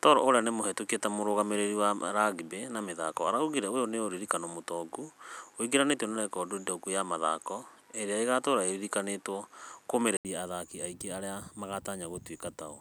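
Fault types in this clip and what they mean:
Input switched to a poorer device: for the first 10.25 s the speech sounds dull and boxy, with nothing above 12.7 kHz, a level about 5 dB different and a faint background noise some 40 dB down. An 80 ms silence then breaks the sound and it clears up just before "athaki aingĩ arĩa". The likely cause is the system recording from a narrower-band microphone or headset profile before switching back to the fuller input.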